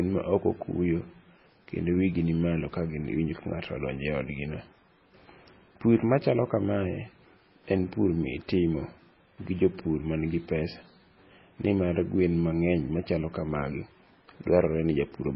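Heavy MP3 compression runs through the whole of this speech recording, most likely the result of a very low bitrate, which fits something around 16 kbps. Nothing survives above about 5.6 kHz, so sibilants lose their hiss and sound dull and lisped, while the remaining band has a watery, swirling quality as weak components flicker in and out. A spectrogram would show a hard flat ceiling at 5.6 kHz and patchy, blocky holes beneath it that change from frame to frame.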